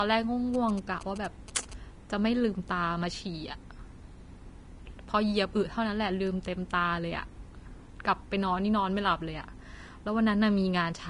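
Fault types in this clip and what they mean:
Vorbis compression: The speech has a hissy, grainy treble, roughened tones and softened attacks, and nothing above 10.6 kHz, likely from Vorbis coding at a rate fitting about 34 kbps. The damage is plainly audible throughout, unlike a simple low-pass filter, which dulls without adding grain.
GSM signalling bursts: From 0.54 to 1.74 s a galloping dit-dit-dit of short buzzes at 217 Hz sits well below the speech, from a nearby phone signalling. Its gated, stuttering rhythm tells it apart from steady mains hum, which never pauses.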